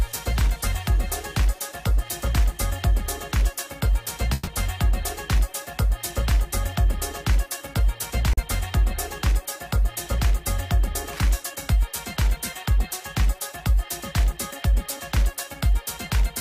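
At 4.33 s a burst of packet loss hits. About 140 ms of audio never arrived, so the receiver stretched the last sound into a fading buzz or hiss until 4.49 s. The spectrogram shows smeared, decaying bands, and the audio picks up later with the missing section gone.

At 8.33 s comes a short concealed packet loss. About 40 ms was missing and rebuilt from the preceding sound, then blended back in by 8.39 s. It is heard as a brief smear or wobble.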